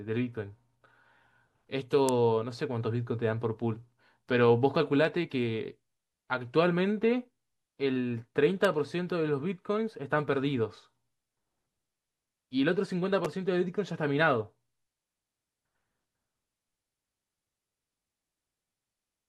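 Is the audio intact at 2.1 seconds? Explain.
No. At 2.09 s there is an electrical switching spike, a sharp snap peaking near -10 dBFS. It is likely a nearby switch arcing into the line.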